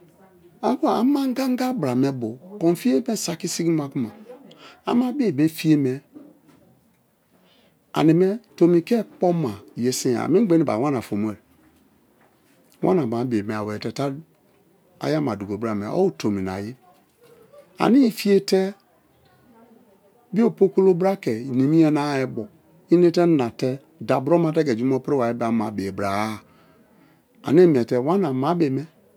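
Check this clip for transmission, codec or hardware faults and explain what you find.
Nothing faulty can be heard anywhere in the speech.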